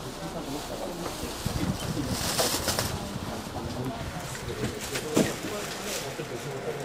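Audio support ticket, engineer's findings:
Damaged data in a compressed stream, 4.95 to 5.00 s: brief glitch, about 44 ms. Decoder misreads corrupted frames, loses sync, then resumes at the next valid frame header.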